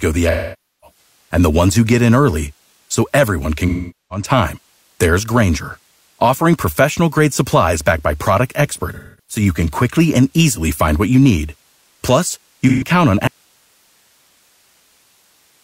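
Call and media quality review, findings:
AAC frame loss with concealment, 0.31–0.97 s. Smeared, phasey fill, about 512 ms. Decoder repeating last good spectrum. Again 3.68–4.26 s, after "early so everyone can", before "time there's". About 427 ms, same smear. At 8.93–9.41 s, after "supplies backed by product", before "you can quickly and". Scattered gaps, longest around 300 ms. At 12.68–12.88 s, 128 ms, brief noisy patch. Component: AAC decoder concealment.

Audio dropout to a faint residue from 13.28 s to end. Abrupt cut, not a fade. Only hiss remains, about 40 dB below signal level. Downstream path still live. Likely cause: upstream source or capture feed lost while output chain kept running.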